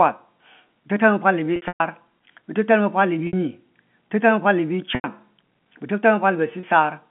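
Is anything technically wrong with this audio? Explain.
Yes, there's packet loss with pitch repetition, at 1.56 to 1.80 s (180 ms lost, scattered over 240 ms, longest run 120 ms), 3.27 to 3.33 s, 4.95 to 5.04 s and 6.60 to 6.63 s. The receiver loops the last pitch period over each gap, so you hear a brief held, buzzy note that fades out, with the longest stretch dropping toward silence, and the 30 ms hit fits single 30 ms packets. The G.711 phone band comes through as narrowband audio.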